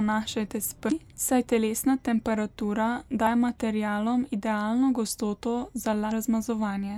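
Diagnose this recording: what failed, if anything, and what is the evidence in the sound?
The codec stage failed: there is damaged data in the compressed stream. Three short breaks interrupt the speech, at 0.88–0.92 s just before "saj telesna temperatura", at 3.23–3.27 s between "saj telesna temperatura" and "materialom idealno", and at 6.08–6.12 s. Each lasts about 40 ms. At each point corrupted bytes leave the decoder unable to parse the frames. It loses sync and searches until it locks onto the next valid frame header.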